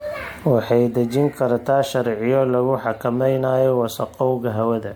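Throughout the speech, the audio has likely been through generation loss: repeated decoding and re-encoding with MP3, around seven passes at a rate that sounds like 96 kbit/s. Each pass re-quantises on a shifted frame grid, so noise and spectral holes build up, giving a swirly, hollow, smeared sound with blurred attacks, while content still reaches 20.1 kHz.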